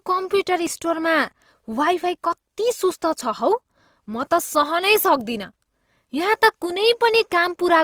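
Opus compression runs through the whole clip, and its damage is plainly audible. The speech sounds grainy and rough, with a noisy texture where clean detail should be, because the encoder keeps each band's energy but, short of bits, fills bands with folded lower content or noise. The spectrum still reaches about 20.2 kHz, pointing to the full-band music (CELT) mode, and the roughness fits a rate near 24 kbps, the likely cause.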